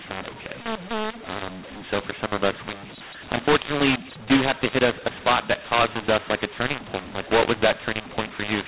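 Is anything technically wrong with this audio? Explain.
Yes. Throughout the clip the speech has a mu-law and A-law mix-up. The audio was coded as telephone mu-law and then decoded as A-law. Its band stops near 4 kHz, which fits ordinary 8 kHz G.711 telephone coding.

The two laws map the 8-bit codes to amplitude along different logarithmic curves, so each sample is rebuilt at the wrong level. Some peaks come out too large and others too small, and the quietest samples are pushed well above silence. The speech sounds harsh and gritty, and the gaps between phrases fill with hiss. On a waveform, the pauses show a raised noise floor instead of a flat line, and the peaks look uneven. On a spectrogram, broadband distortion smears across the whole band under 4 kHz, including the silences.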